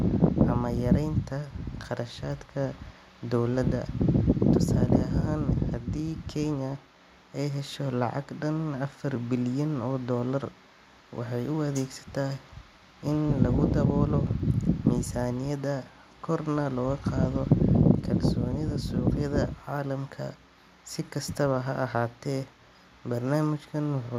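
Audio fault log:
No faults found anywhere in this speech recording.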